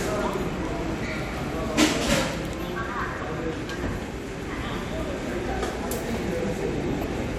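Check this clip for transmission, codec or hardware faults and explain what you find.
One fault turns up, right near the end. From 6.98 to 7.09 s there's DAB burbling: roughly 0.2 percent bit errors slip past error correction, corrupting MP2 sub-bands across a few frames into brief blips of noise in single sub-bands.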